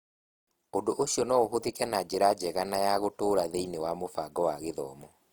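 Opus compression damage runs through the whole speech recording. It is plainly audible. Voiced sounds come across rough and grainy rather than swirling. Band energy seems preserved, but fine detail within the bands has been replaced by noise or folded copies of lower bands. The likely cause is Opus in its music mode at a low rate, which fits about 24 kbps. Bandwidth stays wide, with content reaching about 20.4 kHz.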